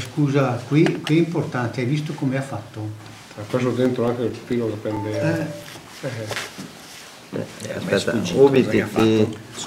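CD scratch ticks run from 3.85 to 6.73 s and again from 8.33 to 9.22 s, about five a second. A blemish defeats error correction once per revolution, leaving a few concealed milliseconds. The steady rhythm distinguishes it from random crackle.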